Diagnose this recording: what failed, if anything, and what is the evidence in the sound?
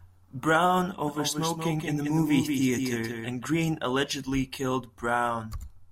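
A doubled audio track runs from 1.08 s to 3.46 s. A second copy of the speech trails the original by roughly 200 ms, about 5 dB quieter. It carries the full bandwidth, with no decay or room colour, so it is not an acoustic echo. It appears abruptly at 1.08 s and vanishes just as abruptly at 3.46 s. The likely cause is a capture or routing fault, where a slower second path records the same signal and gets mixed back in.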